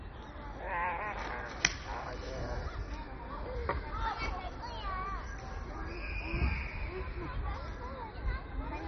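From start to finish the audio is dull and bandlimited, with nothing above about 6.1 kHz, and it carries a gurgling, granular roughness. That points to heavy MP2 compression, likely at a rate around 32 kbps, where Layer II starves its sub-bands of bits, shuts off the upper ones and coarsely quantises the rest. A spectrogram would show a hard ceiling near 6.1 kHz, with patchy, flickering blocks of energy just below it.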